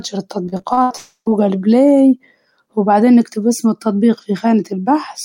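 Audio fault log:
0.45–0.92 s, repeated packet loss (robotic sound): the speech breaks up into roughly six short holes, the longest about 71 ms, each patched by stretching the preceding sound so that about 41% of this half-second is filled-in material. The repeated copies give a choppy texture with pieces missing. On a spectrogram, harmonics turn into flat, smeared horizontal bands between normal patches. The waveform shows short repeating cycles of near-identical shape.
0.96–1.28 s, long network dropout: about 0.3 s of audio is missing, most likely because nothing arrived from the network for this stretch. The receiver extends the last sound as a fading buzz or hiss. The final 80 ms or so is silent before the speech resumes with that section gone. On a spectrogram, frozen, blurred bands fade out to an empty gap. The waveform shows a decaying, repetitive tail dropping to a flat line, then an abrupt restart.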